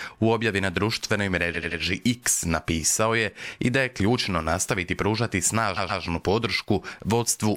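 Repeated frames: the decoder replayed a block of about 85 ms three extra times at 1.54–1.79 s, then one of 128 ms twice more at 5.76–6.02 s. Each stutter adds 0.26 s.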